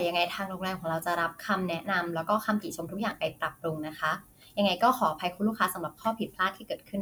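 No technical faults can be heard anywhere in the recording; the speech signal stays continuous and steady throughout.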